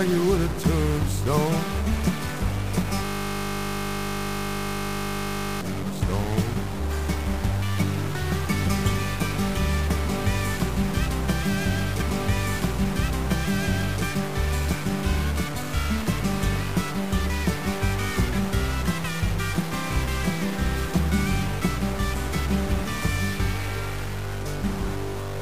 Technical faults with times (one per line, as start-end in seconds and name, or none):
0.00-25.41 stuck bit
3.05-5.61 system hang loop